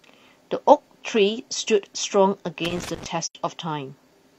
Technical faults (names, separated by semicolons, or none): loose connector crackle; AAC frame loss with muting